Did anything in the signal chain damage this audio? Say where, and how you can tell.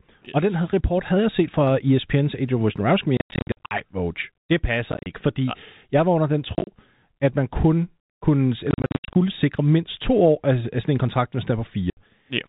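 Yes, at the network stage: the speech is chopped by silent holes at 3.17 to 3.71 s, 4.92 to 5.06 s, 6.55 to 6.67 s after "jeg var under den", 8.71 to 9.15 s after "at man kun kunne", and 11.9 to 11.97 s after "sådan en kontrakt hvis". This is packet loss filled with silence. The gaps come in steps that fit 10 ms packets, with runs up to 90 ms.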